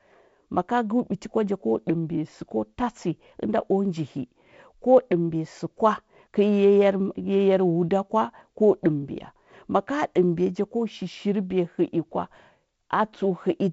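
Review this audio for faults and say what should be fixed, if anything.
Nothing needs fixing; the audio contains no faults.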